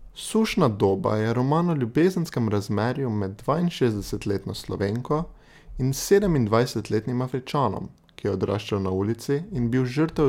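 Speech recording with no audible technical faults.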